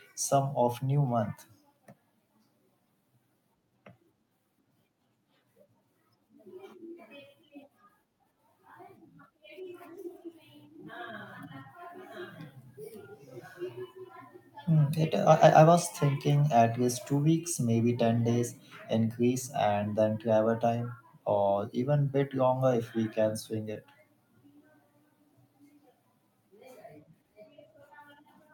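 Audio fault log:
23.73–23.77 s, short concealed packet loss: right after "we can swing" there's a quick smeary blip where about 20 ms of the call didn't arrive in time. The receiver papered over the hole by stretching out the sound it had just played, then cross-faded back into the real signal, so you get a brief wobble rather than a clean dropout.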